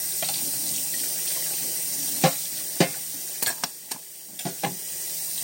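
Throughout, a wrong sample rate is at work: the samples are played back faster than they were captured, with no conversion, which fits a 32 kHz recording run at 44.1 kHz. Everything runs 1.38 times too fast and sits about 5.5 semitones high, sounding hurried and chipmunk-like.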